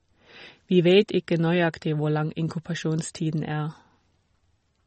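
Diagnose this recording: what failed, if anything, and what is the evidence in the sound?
The codec stage failed, most likely through heavy MP3 compression. Throughout the speech, nothing remains above 8.3 kHz, and the damage is plainly audible. A starved encoder drops the treble and zeroes weak frequency lines. That fits a low bitrate near 32 kbps.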